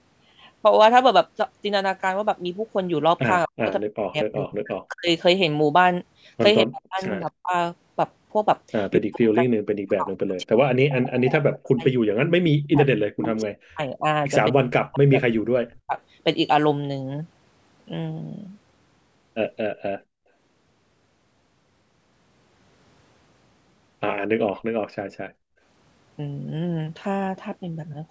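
Speech recording from a call, band-limited to 8 kHz by the call microphone processing, with three kinds of echo-canceller fault. Speech suppressed in double talk occurs at 3.45–5.09 s, 6.65–7.53 s and 8.97–15.98 s: the voice is pulled down by up to about 40 dB in pieces, roughly a second, half a second and five seconds in total. This is likely the canceller attenuating the near-end talker while the far side was also speaking. Echo leak is audible at 10.89–11.24 s, 12.63–13.2 s and 19.76–19.81 s as a faint copy of the speech trailing by 238 ms, about 15 to 35 dB below the voice, the last only a brief scrap. The likely cause is residual loudspeaker pickup that the far-end canceller did not fully remove. Background gated by the echo canceller shows at 20.05–20.29 s and 25.0–25.61 s. The room sound drops by about 28 dB and about 32 dB respectively, then returns as the canceller releases its hard microphone attenuation during loudspeaker playback.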